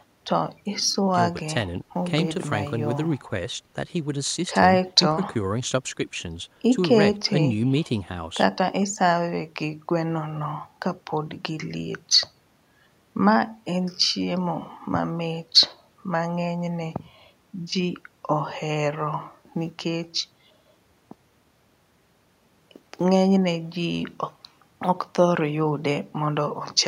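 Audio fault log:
Nothing stood out on listening to this speech recording.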